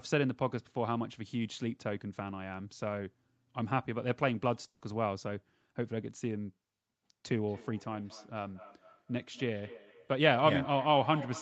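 At 4.67 to 4.83 s, a burst of packet loss drops about 140 ms: the last sound is stretched and faded out, then 40 ms of silence, visible as a smeared, fading stretch ending in a blank gap.

From 7.48 s to the end, feedback echo between two devices repeats the speech roughly every fifth of a second, peaking about 14 dB below it, appearing as stacked, thinning copies of each onset.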